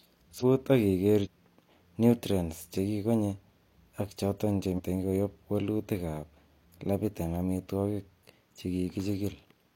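At 0.38 s, 1.21 s and 4.74 s, the last between "ak choton" and "koyob wolutik", the speech jumps forward: compressed frames skipped. Whole coded frames never reach the output, so roughly half a second of speech vanishes at the first two points and around 150 ms at the third, which fits about ten and three frames of 46.4 ms each. Unlike a dropout, there is no silent gap.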